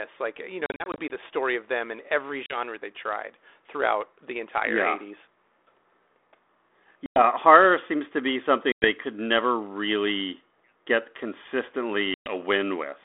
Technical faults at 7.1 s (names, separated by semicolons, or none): packet loss on an ADPCM call